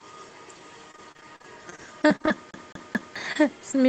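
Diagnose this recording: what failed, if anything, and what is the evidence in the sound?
Network stage: packets of the call stream went missing or arrived late repeatedly from 0.91 s to the end of the clip. The receiver kept bridging each gap by stretching the last decoded sound, so the speech turns choppy and robotic, with fragments dropped between patches.

Playback from disc: from 2.51 s to 3.16 s the pickup kept jumping back to the same point, a CD stuck on one turn. A 0.22 s slice of speech repeats three times, each restart marked by a brief mute, producing a fast, evenly spaced stutter over the already broken call audio, whose top end stops around 8 kHz.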